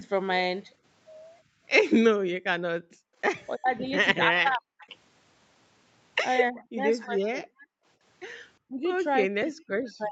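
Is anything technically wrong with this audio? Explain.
Yes, an echo canceller in this speech clip is fighting the far side.

From 1.44 to 2.62 s and 7.76 to 7.86 s, background gated by the echo canceller: the room tone dips about 40 dB while the loudspeaker plays, but the voice itself isn't hit.

From 2.9 to 4.66 s, 6.51 to 7.48 s and 8.66 s to the end, the voice dips deeply and breaks up. This is likely speech suppressed in double talk, with the canceller ducking the talker too.

At 4.79 to 4.97 s and 6.56 to 6.8 s, a faint copy of the voice returns 0.36 s late, likely echo leak. Unlike the suppression, this adds sound rather than removing it.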